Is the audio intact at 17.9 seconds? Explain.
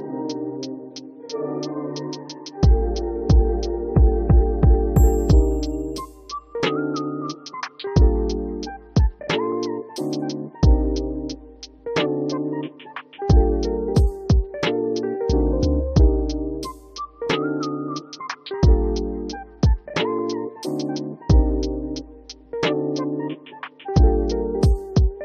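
Yes, the audio at 17.9 seconds is intact, with no dropout, click, distortion or other fault to be heard at that moment.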